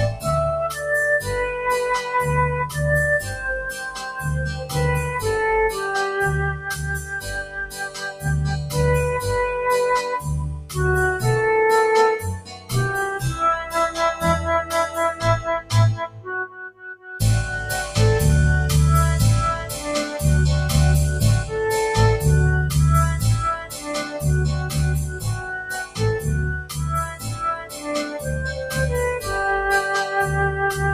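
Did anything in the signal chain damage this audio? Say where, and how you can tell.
Yes. A noise suppressor applied to music or sounds runs throughout at the call-processing stage: steady material swings roughly 10 dB as the suppressor misreads it as noise.

Sound cut by the noise suppressor appears at 0.12–1.29, 2.67–4.76, 6.53–8.74, 10.2–10.78, 12.35–12.73, 13.65–17.2, 23.64–23.86 and 25.07–29.29 s. Held portions sink by about 9 to 16 dB at their deepest, while onsets survive.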